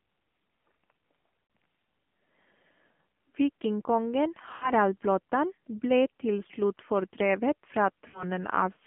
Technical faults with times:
0.00-8.87 AMR narrowband mobile codec
1.44-1.50 lost AMR speech frames
4.56-4.70 lost AMR speech frames
8.08-8.24 lost AMR speech frames

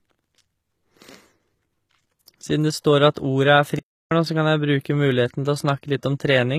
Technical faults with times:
0.00-6.58 HE-AAC compression
3.14 pre-echo
3.79-4.11 playback stall

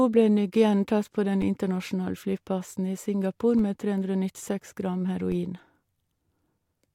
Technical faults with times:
1.42 DC step
3.59 DC step
5.32 DC step

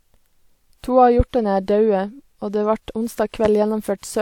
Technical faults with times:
1.20-1.23 loud pop
3.45-3.48 loud pop

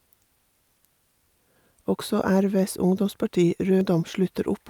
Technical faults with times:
1.56 audio missing between chunks
3.81 audio missing between chunks

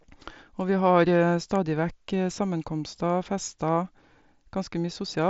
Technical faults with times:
none

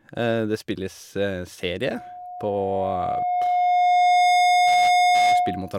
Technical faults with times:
1.89-5.78 loudspeaker feedback squeal

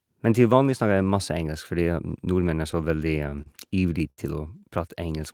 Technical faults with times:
2.71-3.48 repeated stalls (stutter)
4.10-4.19 short stall from a late packet

